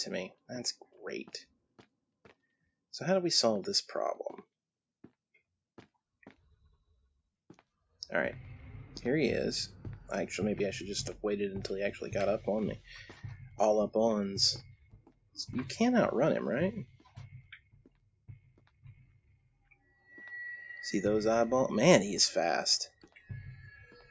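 A speech noise suppressor left on this sound treats steady tones and decaying tails as noise, so the level pumps and thins by about 15 dB throughout. The noise suppressor also cuts sound in several places, sinking held material and shortening decays: 0.80 to 0.96 s (about 12 dB down), 1.44 to 2.40 s (about 18 dB), 13.44 to 13.59 s (about 8 dB), 14.62 to 15.37 s (about 19 dB), 16.86 to 20.10 s (about 19 dB), 22.88 to 23.30 s (about 16 dB), and 23.58 s to the end (about 9 dB).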